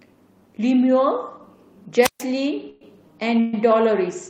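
At 2.00 to 2.24 s there's a wireless microphone squelch dropout: the radio signal fades, hiss rises, then the receiver mutes for about 135 ms before the speech comes back. Later, at 2.69 to 2.82 s and again at 3.40 to 3.69 s, the sound stalls into a fading buzz or hiss for 115 ms and 131 ms, then resumes where it left off with nothing lost. That's likely a call audio freeze, with delayed packets draining the jitter buffer.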